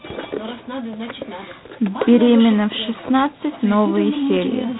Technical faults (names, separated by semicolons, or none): G.726 ADPCM